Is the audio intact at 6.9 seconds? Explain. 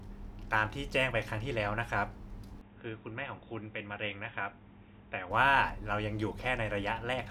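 Yes, the speech at 6.9 seconds plays through intact, with no dropout, click, distortion or other fault at that point.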